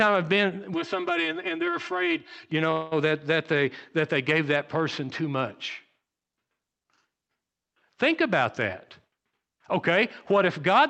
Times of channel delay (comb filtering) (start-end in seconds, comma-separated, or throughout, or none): 0.74-2.52